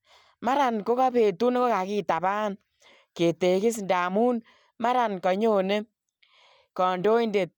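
A speech recording, with nothing technically wrong with it.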